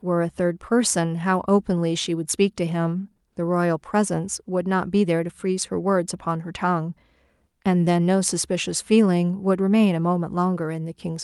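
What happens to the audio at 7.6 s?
Nothing goes wrong at 7.6 s: the speech plays through that moment intact, with no dropout, click or distortion.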